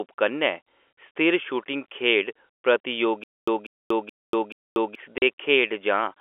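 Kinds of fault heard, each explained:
Stutter with silent gaps: From 3.24 s to 4.95 s, the same 190 ms fragment of speech plays four times, each followed by about 240 ms of digital silence, so the burst returns every 430 ms at a steady pace. This is likely a stalled player or stream that replays its last buffer on each retry before running dry. The speech that should have filled that span never arrives. The identical repeated fragment is what separates it from simple dropouts.
Packet loss filled with silence: At 5.18 s, a single 40 ms hole cuts into the speech. Its length fits two consecutive 20 ms packets going missing, with the receiver inserting silence in their place. The gap starts and ends abruptly. Unlike the stutter, nothing is repeated and there is no rhythm: the sound simply vanishes briefly and resumes where it should, over an ordinary telephone band of about 300 Hz to 3.4 kHz.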